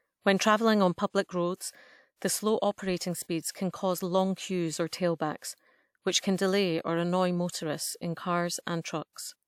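At 3.51 s and again at 4.88 s there's pre-echo in front of sharp attacks in the speech. A short hiss creeps in about 37 ms and 40 ms before each onset, and the attacks themselves come across soft and smeared. The codec spread its quantisation noise across the whole transform block, so noise scaled for the loud attack also leaked into the quiet stretch just ahead of it.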